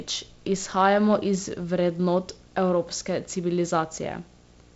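A screen or video cable is coupling into the audio path for the whole clip, causing video or display buzz. Interference at the picture's 59.94 Hz field rate sits under the speech as a steady buzz, roughly 25 dB below it, with a gritty hash riding above. The 15.7 kHz line-rate tone lies well above the roughly 7.7 kHz ceiling of the clip's G.722 wideband coding, so it is removed rather than heard.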